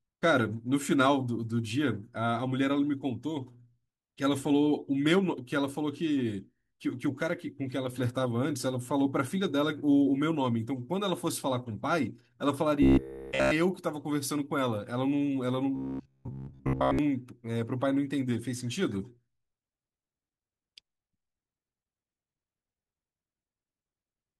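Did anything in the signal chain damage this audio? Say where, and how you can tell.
Yes. From 12.82 to 13.51 s and again from 15.76 to 16.99 s the speech collapses into robotic sound from repeated short buffers: a rigid, metallic buzz pitched at 66.7 Hz that still roughly tracks the syllables. That is a period of 15 ms, so the audio path is replaying one 15 ms block over and over. The likely cause is a driver or buffer underrun, where new audio arrives too slowly and the last block is looped in place of real signal.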